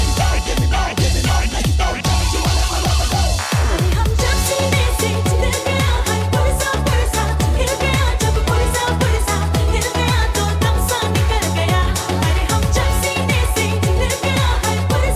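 Nothing goes wrong anywhere in the recording, so there's no technical fault to point to at any moment.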